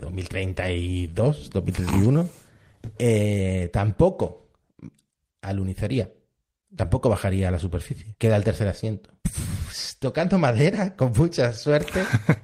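From 1.85 to 3.24 s, scattered short gaps appear. About seven tiny packet losses, each roughly 10 ms, were patched by extending the preceding speech, leaving brief ticks and smears.

From 3.27 to 4.04 s, a jitter buffer slow-down follows. Repeated pitch periods stretch the speech to 95% speed, adding 48 ms, drawn out at unchanged pitch.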